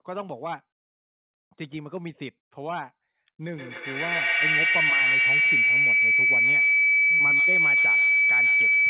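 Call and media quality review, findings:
Feedback howl from 3.47 s to end of clip. Tone near 2 kHz, loop repeat about every tenth of a second, peaking about 12 dB above speech. Probable component: two endpoints in one room, acoustic loop gaining level each trip. Spectrogram: bright horizontal line near 2 kHz brightening over time. Waveform: envelope swelling past speech level. Speech band above it stops at 4 kHz, consistent with a narrowband codec.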